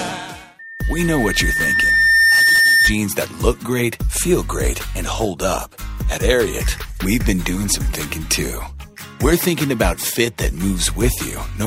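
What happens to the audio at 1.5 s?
At 1.5 s a loudspeaker feedback squeal is underway, spanning 0.59 to 2.95 s. A microphone is re-amplifying its own loudspeaker, so a 1.8 kHz tone swells over roughly two seconds to about 5 dB above the audio. That gradual build sets it apart from a steady interfering whistle.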